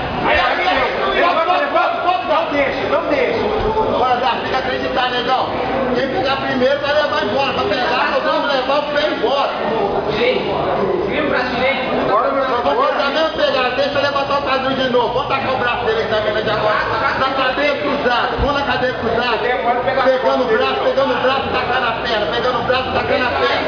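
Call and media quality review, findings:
Nothing to flag on this one: listening all the way through, there's no audible fault anywhere in the audio.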